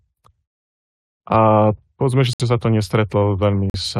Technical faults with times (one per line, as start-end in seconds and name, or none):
2.33-2.41 corrupt frame muted
3.70-3.76 corrupt frame muted